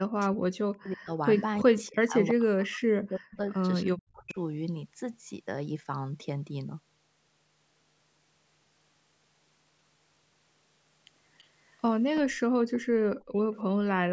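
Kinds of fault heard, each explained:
Speech suppressed in double talk: From the start to 4.37 s the talker's voice sinks, by as much as about 40 dB, and breaks into pieces for roughly three seconds in total. This is likely an echo canceller that, with both sides talking at once, could not tell the near talker from loudspeaker echo and turned both down.
Echo leak: A faint, delayed copy of the speech trails about 328 ms behind, in short scraps near 1.4 s, 4.0 s, 11.4 s and 12.2 s and a longer stretch from 12.76 to 13.59 s, between about 35 and 15 dB below the voice. This is likely loudspeaker sound the far end's echo canceller failed to remove and sent back.
Background gated by the echo canceller: The room sound briefly drops away by about 15 dB from 13.18 to 13.37 s, for roughly 200 ms, then returns. The echo canceller clamped the microphone down hard while the loudspeaker was playing and released it once it let go.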